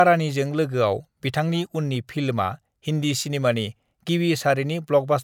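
Nothing stood out on listening to this speech recording.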